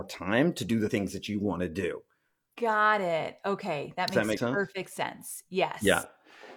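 A speech recording marred by damaged data in a compressed stream at 0.84 to 0.91 s and again at 4.32 to 4.38 s, where corrupt frames make the decoder misread and lose sync, giving a brief audible glitch. At 4.08 s a sharp snap, most likely an electrical switching spike picked up from a nearby switch or discharge, appears as a near-vertical needle in the waveform and a thin full-height line on the spectrogram.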